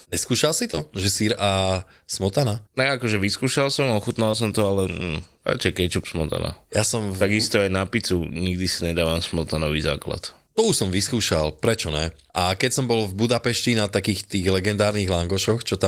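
Brief smears in the speech at 0.71 to 0.75 s, 0.75 to 0.79 s and 4.31 to 4.35 s are short concealed packet loss: missing audio was extrapolated from preceding sound, then blended back.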